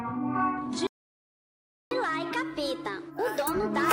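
Playback stall from 0.87 to 1.91 s: the sound cuts out mid-flow for about 1.04 s, likely because the player ran short of data or its thread was blocked. Catch-up at higher speed follows from 1.91 s to the end: the player resamples its backlog at 1.15 times normal speed, raising the pitch by about two semitones.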